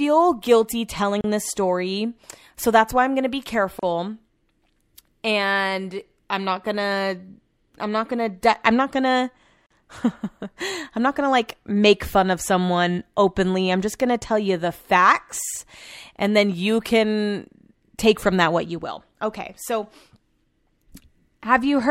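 Brief holes of silence cut into the speech at 1.21 s, just before "this story so that's"; at 3.79 s, right after "why I'm gonna be"; and at 9.66 s, after "I'm not gonna". They last 32, 35 and 42 ms, with smeared edges. These are gaps at a join of encoded pieces: separately encoded segments were spliced without trimming each encoder's start delay and final-frame padding.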